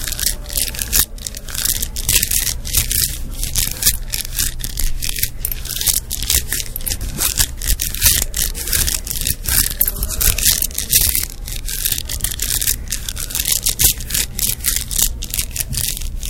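Hard clipping runs through this recording of sounds from start to finish: the signal is overdriven by about 21 dB, so peaks are sliced flat, though on only about 0.7 percent of samples, producing crackle on loud moments.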